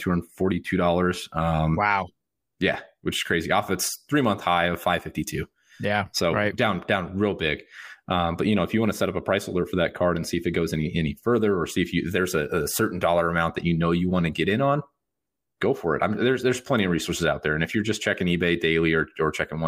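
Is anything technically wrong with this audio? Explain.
No, nothing here stands out as a technical problem; it's just the speech coming through as you'd expect.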